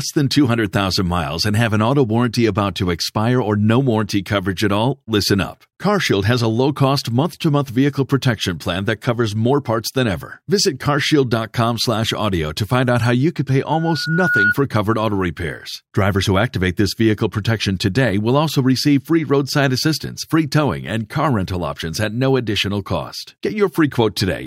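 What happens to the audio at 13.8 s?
A loudspeaker feedback squeal runs from 13.72 to 14.55 s, starting just after "how you could pay" and clearing before "covered auto repairs". The microphone is picking up its own loudspeaker, and around 1.4 kHz the loop gain tips past unity, so that frequency feeds on itself. It swells as a single piercing tone over most of a second, ending a few decibels louder than the speech.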